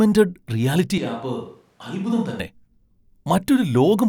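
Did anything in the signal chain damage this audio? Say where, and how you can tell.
Yes: a switch to a distant microphone, likely a close-microphone dropout at capture, turns speech from 0.98 to 2.40 s abruptly roomy, thin and about 5 dB quieter.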